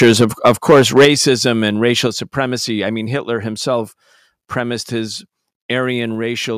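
From 0.01 s to 1.3 s the speech shows microphone overload. Its peaks push roughly 7 dB past the converter's ceiling, so around one sample in twenty has its top sheared flat, likely because the input gain was set too high. The result is a harsh, crackly edge on the loudest syllables. Unlike a level drop, it damages only the timbre of the peaks.

Overlapping that stretch, the microphone volume is stepped down at 0.04 s by about 2 dB and at 1.05 s by about 6 dB. It steps down again at 2.07 s by about 4 dB, right before "supremacy I mean", and at 6.15 s by about 2 dB. These are likely the call software cutting the device gain in response to clipping. Each one is an abrupt, clean drop in level that takes the background down along with the speech. It adds no distortion of its own, which separates it from the overload.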